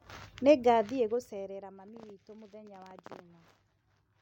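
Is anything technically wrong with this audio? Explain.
Yes. From 0.64 to 1.78 s, just before "mami witũ mũ thenya", a fine ticking zipper noise rides on the speech as its level drops by roughly 20 dB. The gain falls in discrete steps, around 200 per second, with no smoothing, and each jump leaves a tiny click.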